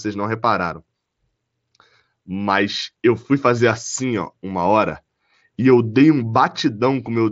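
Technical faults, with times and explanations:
No technical faults can be heard in this speech.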